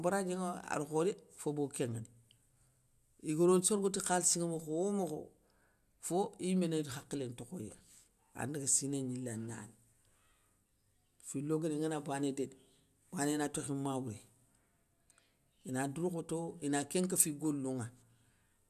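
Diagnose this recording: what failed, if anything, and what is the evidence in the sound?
Nothing in the chain fails here: the speech carries no audible defect at any stage from capture through to playback.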